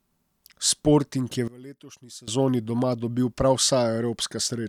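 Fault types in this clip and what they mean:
One channel inverted, 1.48 to 2.28 s: the speech drops by about 20 dB and turns faint for 0.8 s, likely because one stereo channel's polarity is flipped, so the centred voice cancels when summed to mono, leaving only the faint left-right difference.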